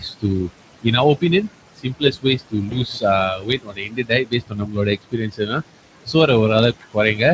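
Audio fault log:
Throughout: noise suppressor artifacts. The suppressor estimates the steady background in each frequency band and pulls those bands down frame by frame, by about 21 dB here. The background therefore collapses in the gaps between phrases and swells back up whenever speech starts, so the noise floor seems to breathe with the talker.
0.0–0.5 s, 1.76–3.03 s, 3.35–6.28 s, 6.73–7.21 s: speech cut by the noise suppressor. In these stretches the suppressor mistakes parts of the speech for background and turns them down with it, by up to about 20 to 21 dB. Quiet consonants, word endings and soft passages turn faint, so they sound swallowed. This happens briefly in the opening half second, before "இன் அவர்", for a few hundred milliseconds in the second range, and for around two seconds across 3.35–6.28 s.
2.69–2.81 s: VoIP packet loss concealed by the speech codec. About 20 ms of audio never arrived. 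The Speex decoder filled the gap by carrying forward its last pitch and vocal-tract filter while lowering the gain, so the sound smears into a short buzzy tone or coloured noise that fades rather than dropping out cleanly. Each decoded frame depends on the one before it, so the speech stays weak or distorted for tens of milliseconds after real packets resume.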